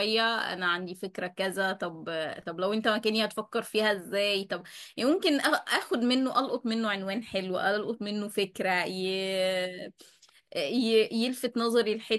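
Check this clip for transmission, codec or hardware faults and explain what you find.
No technical faults can be heard anywhere in this speech recording, and the signal stays continuous and stable throughout.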